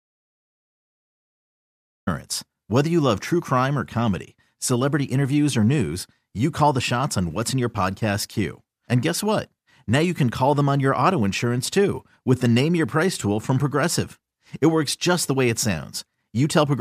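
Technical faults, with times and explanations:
0.00 to 2.07 s, audio dropout to silence: the clip opens in dead silence, with no room tone at all, and the speech only kicks in at 2.07 s. Most likely the input was lost or muted while the recorder kept writing silence, so whatever came before is simply gone.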